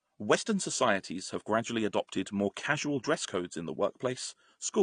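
Throughout the speech there is plainly audible AAC compression damage: the audio sounds dull and smeared, with a watery warble on sustained sounds and fizzy sibilants. A spectrogram would show nothing above 9.8 kHz and patchy holes or noise-filled bands below it, likely from AAC-LC at around 32 kbps.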